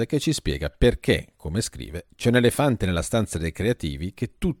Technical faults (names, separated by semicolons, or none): block size mismatch (truncated)